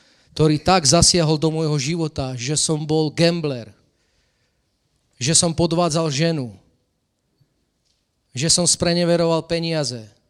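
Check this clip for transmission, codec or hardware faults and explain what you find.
Nothing in this speech recording stood out as a fault on listening.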